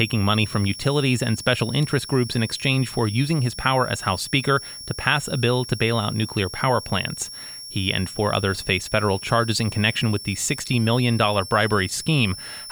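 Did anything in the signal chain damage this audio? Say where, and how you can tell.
Yes. A switching supply whistle sits under the speech for the whole clip. It is a thin, high tone. Its pitch wanders between about 5.34 and 5.55 kHz rather than holding still. It runs roughly 15 dB below the speech. The damage is in the analogue stage. A switching power supply near the audio path is running in an audible burst mode or beating with another one, and its frequency shifts as the load changes.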